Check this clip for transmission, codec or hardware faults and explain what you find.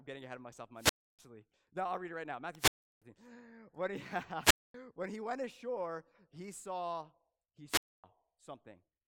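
The speech has four wireless microphone squelch dropouts. They fall at 0.76–1.21 s after "ahead of myself in", before "no I'll read it"; at 2.57–3.03 s after "read it right now"; at 4.41–4.74 s; and at 7.68–8.04 s after "ashore he saw he". Each time, the FM radio link faded and the receiver's squelch muted the output for about 240–340 ms. You hear a brief rise of static, a near-silent gap, and then the speech returns.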